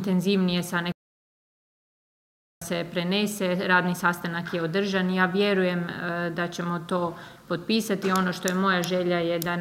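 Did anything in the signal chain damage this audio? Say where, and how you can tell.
Yes: a playback stall from 0.92 to 2.62 s cuts the sound to silence for 1.7 s, likely because the player's buffer ran dry mid-stream.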